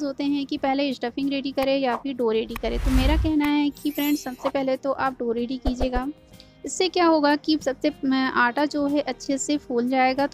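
At 9.26 to 9.28 s a repeated buffer plays one short piece twice with a hard join, fitting a 20 ms buffer, unlike a dropout, where sound goes missing.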